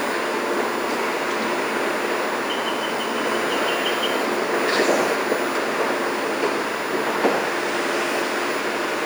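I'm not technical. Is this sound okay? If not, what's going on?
No. A steady, high-pitched whine runs under the sound from start to finish. This is USB whine: the USB connection draws power in rapid 1 ms bursts that leak into the audio, producing a fixed 1 kHz tone, loudest at 2 kHz.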